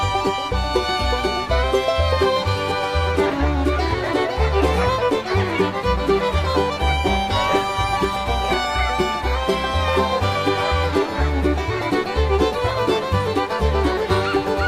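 No audible technical faults occur anywhere in this recording.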